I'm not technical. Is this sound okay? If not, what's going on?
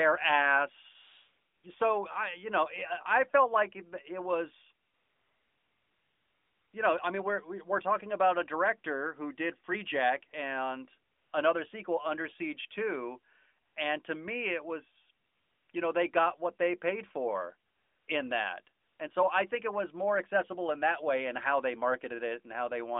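No, not quite. In the pauses the phone decided nobody was talking and stopped sending the real audio, so the other end filled in fake, smooth hiss. That's AMR comfort noise. You'll hear the background switch to that flat hiss and back at 1.0–1.6 s, 4.9–6.7 s, 11.1–11.3 s, 13.7–13.8 s, 15.3–15.7 s, 15.72–15.74 s, 17.7–18.1 s and 18.8–19.0 s.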